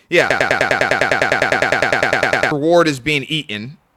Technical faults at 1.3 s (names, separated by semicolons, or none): broken-record loop